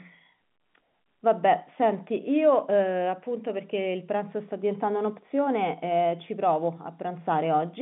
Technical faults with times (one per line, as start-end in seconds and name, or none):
none